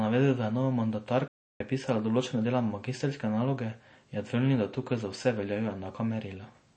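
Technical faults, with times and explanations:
throughout: MP3 compression. The speech has plainly audible codec damage: the sound has a watery, swirling quality where weak frequency components flicker in and out between frames. S sounds pick up a metallic chirp and consonant onsets are smeared. This is likely the result of MP3 encoding starved of bits, which fits a low bitrate around 32 kbps.
1.28 to 1.61 s: playback stall. The speech cuts out mid-flow and the output sits silent for about 0.32 s before the sound resumes. A gap of this kind is likely the player running short of data or having its output thread blocked, so nothing was delivered to the output until it recovered and carried on.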